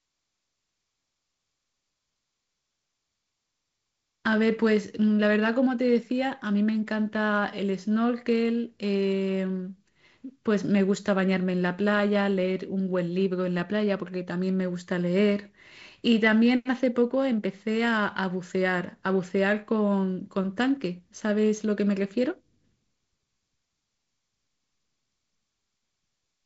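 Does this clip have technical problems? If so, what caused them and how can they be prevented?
No, nothing stood out as a technical problem when listening to this speech clip.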